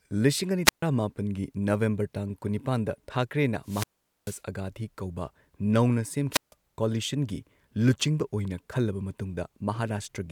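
Wireless microphone squelch dropouts occur at 0.65–0.83 s after "ꯂꯤꯁꯤꯡ ꯑꯅꯤ", 3.63–4.42 s, and 6.31–6.54 s before "ꯀꯣꯂꯤꯁꯟꯒꯤ ꯂꯨꯆꯤꯡꯕ". Each time the fading radio signal brings a hiss rise, and then the receiver mutes for 0.14, 0.44 and 0.15 s. On a spectrogram, broadband noise precedes blank gaps. The waveform shows flat near-silent holes.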